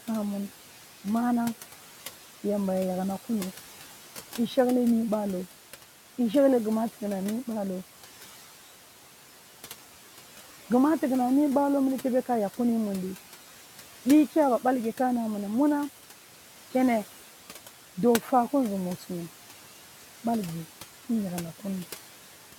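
A speech recording carries noise suppressor artifacts from start to finish. The suppressor pulls down the bands it judges to be steady noise, frame by frame, by about 11 dB, so the room noise, itself about 16 dB under the speech, drops away in the pauses and comes back up beneath each phrase. On a spectrogram the noise floor shows as a patchy texture that darkens between words and fills in under them. On a waveform the gaps look unnaturally quiet.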